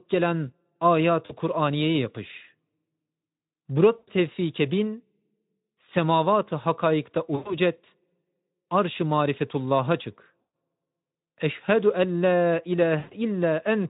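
Speech clip with VoIP packet loss concealed by the speech codec: dropouts near 1.25, 3.97, 7.36, 10.42 (after "marifetullah'a çık") and 12.99 s (after "en la") fill 40 to 120 ms gaps with fading extrapolation, leaving the voice weak or distorted briefly afterwards over a Speex link at roughly 15 kbps.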